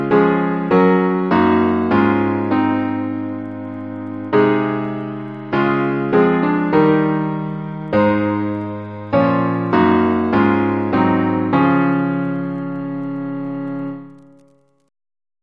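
No technical faults can be heard anywhere in the clip.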